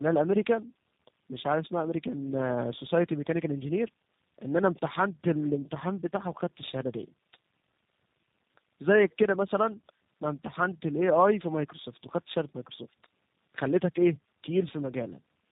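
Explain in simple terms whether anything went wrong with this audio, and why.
Something did go wrong, and it lasts the whole clip. The speech has tandem speech coding. The call crossed several links, each with its own speech coder. At every border the sound was unpacked and packed again. Each coder worked on the already damaged output of the one before. The result sounds rough, muffled and warbly, which fits about three such coders in a row. Nothing above 3.8 kHz survives, so the speech lacks crispness.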